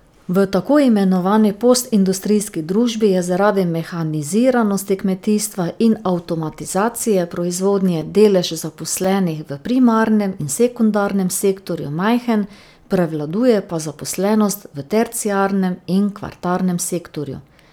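Speech with periodic USB or driver dropouts from 6.99 to 11.09 s: about five brief gaps of a few milliseconds, silence-filled every 1.024 s, heard as regular ticks from a blocked bus.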